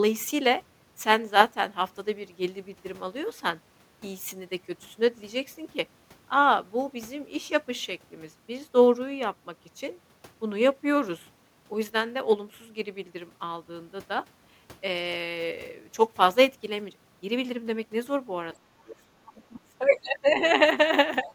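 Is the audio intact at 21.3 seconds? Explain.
No. Speech suppressed in double talk cuts in from 21.23 to 21.3 s: the speech dips by roughly 10 dB for about 70 ms. The likely cause is an echo canceller that took this talker for loudspeaker echo while both sides spoke and turned it down.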